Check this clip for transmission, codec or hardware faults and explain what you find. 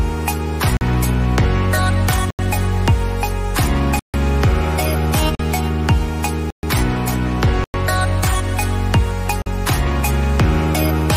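Seven blocks of digital silence drop out at 0.77, 2.30, 3.99, 5.35, 6.50, 7.64 and 9.42 s, lasting 43 to 146 ms. The output buffer likely went unfilled, so samples became zeros with no fade. The three 43 ms holes fit a 2048-sample block, and each gap is heard as a short hole in the sound.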